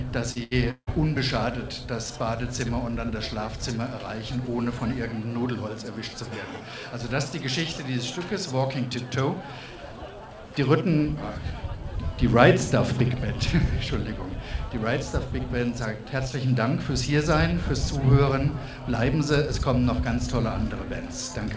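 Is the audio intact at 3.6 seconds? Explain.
Yes, the audio is intact at 3.6 seconds, with nothing beyond the ordinary band limit of the G.722 call path, which leaves no content above 8 kHz.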